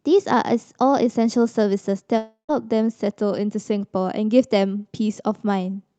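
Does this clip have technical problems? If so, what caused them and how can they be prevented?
Yes. From 2.17 to 2.51 s the receiver stopped getting audio, most likely because of a long network dropout. The receiver filled the gap by stretching the last sound into a fading buzz that runs out into about 0.12 s of near-silence. About 0.32 s of the speech never arrives, so the talk resumes with that piece missing. The sound was carried over an Opus call path whose band tops out around 8 kHz. Prevention: use a steadier connection with enough headroom, plus forward error correction or redundancy, to ride out short outages.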